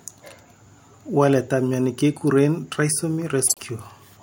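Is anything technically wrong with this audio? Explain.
Yes. Frames out of order at 3.47 to 3.61 s: two neighbouring single frames, consistent with 26.1 ms blocks, play swapped, giving a brief garbled flutter.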